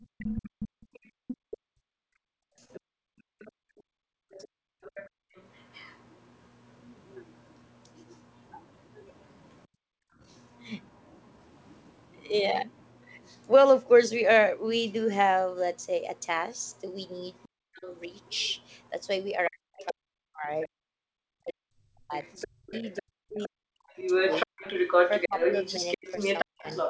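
A speech recording from a call, and the other side's voice leaking through the microphone is audible almost throughout. It runs from 0.01 to 20.68 s, sitting about 15 dB below the talker. It returns from 22.22 s to the end at about the same level as the talker. A second voice under the main one points to echo from a loudspeaker. The likely cause is an echo canceller that failed to remove it.

The background is gated by the echo canceller in three places. Between 0.07 and 5.34 s the room sound drops out for about three seconds in total, at times by about 40 dB. It dips again from 9.67 to 10.2 s, and briefly from 20.80 to 20.88 s. Each time the canceller pulls the microphone down hard while the far end plays, then lets the room back in.

Speech is suppressed in double talk at 2.77 to 3.07 s and 17.47 to 17.89 s. A longer stretch runs from 19.49 to 26.66 s, where about three seconds in total are hit. 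The talker's voice sinks steeply, by around 40 dB at worst. Both sides were speaking at once, and the canceller likely could not tell the talker from the echo, so it turned both down.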